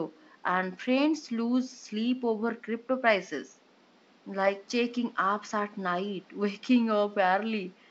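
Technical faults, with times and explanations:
Nothing to flag here: the room noise sits quietly, about 33 dB below the speech, and the wideband telephone coding comes through just as you'd expect.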